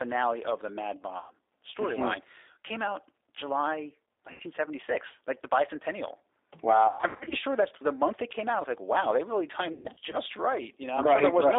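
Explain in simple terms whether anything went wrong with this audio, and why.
The call passed through the G.729 codec, a low-rate phone codec that rebuilds speech from a rough model of the voice. The whole clip has a narrow phone-line tone, with nothing above about 3.7 kHz, and a slightly rough, synthetic edge.

VoIP packet loss, concealed by the speech codec, hits four times. Chunks of audio never arrived, so the decoder guessed from the last sound it had, fading it out. At 1.18–1.33 s (120 ms missing) and 4.32–4.42 s (80 ms), the sound stretches out and fades. At 6.87–7.35 s, just before "sure that's the month", and at 9.73–10.18 s, just after "like wow they really", scattered gaps break the sound up into weak, garbled stretches.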